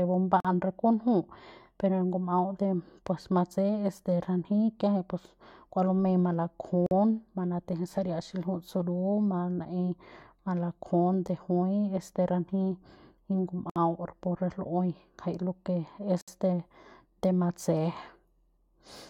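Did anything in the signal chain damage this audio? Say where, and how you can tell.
Yes. Separately encoded pieces were joined without trimming encoder delay and padding, leaving a gap at a join of encoded pieces. Speech drops to silence and resumes mid-flow: 45 ms at 0.40 s, 47 ms at 6.86 s, 61 ms at 13.70 s, and 63 ms at 16.21 s after "lo que es".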